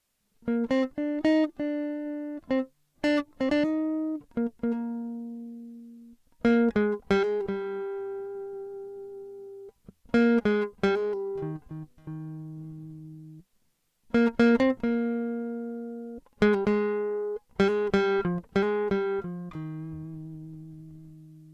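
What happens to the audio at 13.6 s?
Nothing goes wrong at 13.6 s: the music plays through that moment intact, with no dropout, click, distortion or other audible fault.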